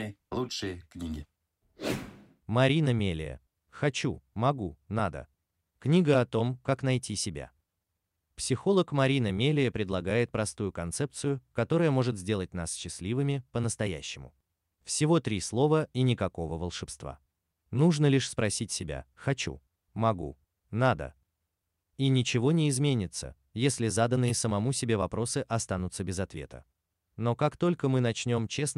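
No technical faults can be heard anywhere in the recording.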